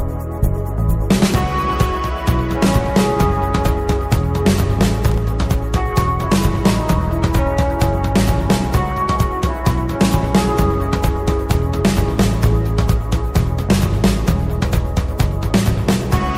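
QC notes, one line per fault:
5.11 to 5.18 s, loose connector crackle: a brief irregular burst of scratchy crackle, about 64 ms long, where a worn or dirty contact in the signal path momentarily lost and regained contact, chopping the signal on and off in rapid, uneven succession. Unlike a single digital click or a dropout, the burst is ragged and clustered, with no clean gap of silence. Unlike steady vinyl surface noise, it is confined to this one moment.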